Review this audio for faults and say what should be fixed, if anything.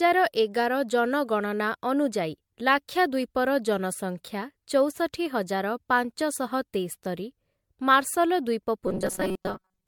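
Generation loss runs the whole way through: swirly, hollow, smeared attacks, likely from about five MP3 re-encodes at 96 kbit/s. Keep a lossless master and encode once.

Robotic sound from repeated short buffers appears from 8.87 s to the end, a rigid 188 Hz buzz, which fits roughly 5 ms chunks looping while about half the audio goes missing, likely buffer starvation. Larger buffers or steadier delivery would stop it.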